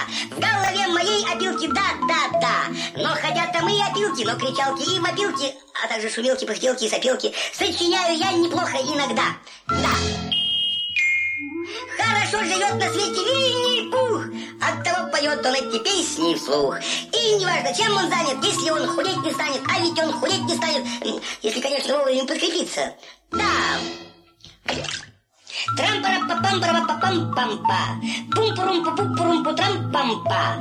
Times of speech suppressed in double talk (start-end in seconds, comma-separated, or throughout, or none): none